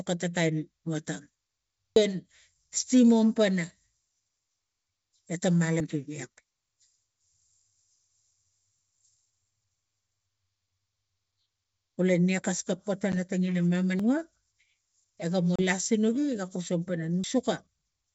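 Speech over a wideband link shows two kinds of break. At 1.96, 5.80, 8.79, 13.99 and 17.24 s the sound jumps forward with no gap. Roughly a third of a second goes missing at the first two and about a tenth at the rest, most likely a dropped buffer (overrun), where capture fell behind and overwritten audio was spliced straight across. Packet loss on an ADPCM call is different. At 13.12 s and again at 15.56 to 15.62 s there is a hard-edged silent hole of 10 ms and then 30 ms, which fits one lost packet and then about three. The speech comes back with some roughness until the decoder's predictor and step size catch up with the sender's. The true silence and the rough recovery set these apart from the seamless skips. The G.722 wideband coding itself stays clear.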